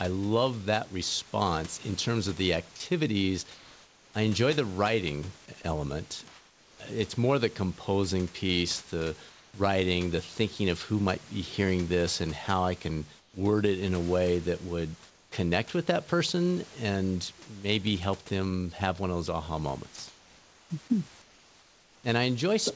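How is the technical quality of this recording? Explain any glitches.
The recording has two recurring glitches: the voice detector clips speech twice, and comfort noise replaces the background in six pauses. The audio stops at 8 kHz, which fits a wideband call codec such as G.722, and a faint room noise sits about 25 dB below the speech.

Sound dropped by the voice detector, 2.76 to 2.80 s and 19.96 to 19.98 s: the sender's voice detector likely judged part of the speech to be background and stopped transmitting. That cuts off about 30 ms of speech in the first case and 20 ms in the second. At each point, speech breaks abruptly into steady hiss, a brief clipped edge before the pause that follows.

Comfort noise in place of the background, at 2.76–4.14 s, 6.28–6.80 s, 9.30–9.54 s, 13.20–13.34 s, 15.10–15.32 s and 19.96–22.04 s: during these pauses the sender likely stopped sending audio, and the receiver filled the gap with synthetic noise shaped like the background. 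The real room sound gives way to a flat, featureless hiss. In the middle four gaps that hiss is also quieter than the actual background, by about 4, 2, 9 and 4 dB, so the floor dips and then comes back when speech resumes.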